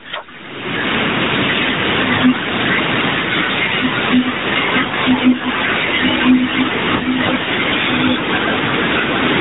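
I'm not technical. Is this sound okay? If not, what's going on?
No, not quite. Throughout there's gain pumping: loud and soft parts end up squashed closer together in level, most likely from a limiter grabbing gain that was set too high. Twice the phone connection hiccups with lost AMR speech frames, where the voice is briefly drawn out and fades, around 4.88 to 4.94 s and again around 6.96 to 7.04 s, where the decoder briefly patched over missing audio.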